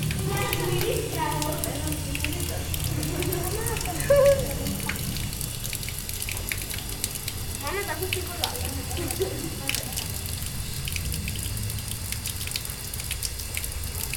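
Audio missing between chunks occurs at 11.05 s, where the sound abruptly skips forward: roughly a tenth of a second disappears and the two sides butt together with no silence between them. The likely cause is a recorder or processor handling the audio in 6.0 s blocks and dropping a short stretch while it closes one block and opens the next, leaving a seam where continuous sound should have been.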